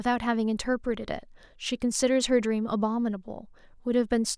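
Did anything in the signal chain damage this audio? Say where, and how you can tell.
No, nothing in the signal chain damaged this audio.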